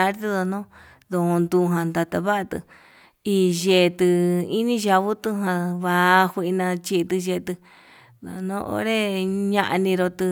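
No technical faults can be heard anywhere in this speech recording.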